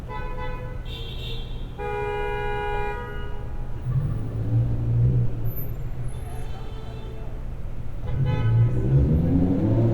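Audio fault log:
Nothing stood out on listening to this recording of sounds.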